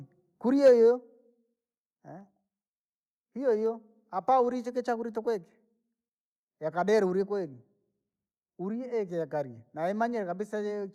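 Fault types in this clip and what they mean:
microphone overload: From 0.65 to 0.71 s the loudest part of the speech is pushed about 3 dB past the converter's ceiling, so around a tenth of the samples in that stretch sit flat at the converter's limit, giving the peak a harsh, crackling edge. On a waveform the tops are squared off against the top and bottom limits, and a spectrogram shows a brief vertical smear of broadband energy. The likely cause is input gain set too high.
microphone volume stepped down: At 0.68 s, in the middle of that distorted peak, the level of everything, speech and background alike, drops by about 2 dB in one step rather than fading. This sound is likely from call software reacting to the clipping by cutting the device's input volume. On a waveform the envelope shrinks abruptly at a single point, and on a spectrogram the whole frequency range turns slightly paler from that moment on.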